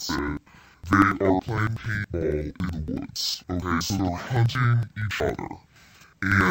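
From start to finish the speech carries an interleaved audio read as planar fault. Each stretch of about 93 ms, which fits a 4096-sample block, has its alternating left and right samples split into halves, and both halves play at half speed. The voice drops an octave, sounds doubled and chops at 10.8 Hz. A spectrogram shows harmonics compressed to half their spacing, with vertical seams every 93 ms. The waveform shows matching discontinuities at each seam.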